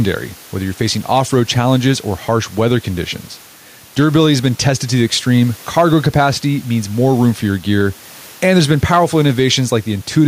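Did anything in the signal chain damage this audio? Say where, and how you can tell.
Yes. Gain pumping runs through the whole clip. The room noise sits about 31 dB below the speech, and the gain swings by around 5 dB. The likely cause is input gain set far too high, with a fast limiter pulling it back on each peak. Levels are squashed.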